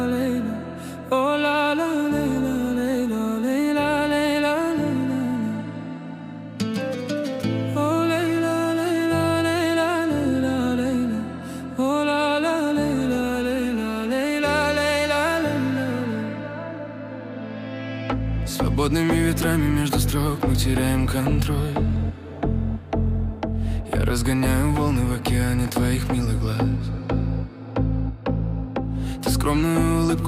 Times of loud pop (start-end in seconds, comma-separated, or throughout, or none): 25.65-25.88